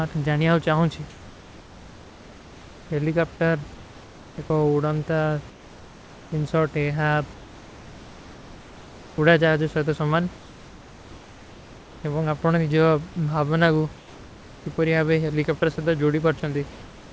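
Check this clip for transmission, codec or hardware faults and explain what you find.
One fault recurs: comfort noise in place of the background, in the speech pauses at 1.10–2.90, 5.50–6.32, 7.34–9.18, 10.38–12.04, 13.98–14.66 and 16.70–17.12 s. In each pause the room background, about 22 to 24 dB below the speech, gives way to a steady, featureless hiss about 2 to 3 dB quieter. The detail returns when speech resumes. The likely cause is discontinuous transmission. The sender stops sending audio during pauses, and the receiver synthesises noise roughly matching the background's spectrum.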